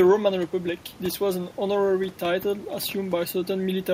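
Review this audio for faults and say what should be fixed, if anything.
Nothing needs fixing: the speech signal shows no technical faults, and the only background is the room's own noise, sitting about 24 dB below the voice as part of the original recording.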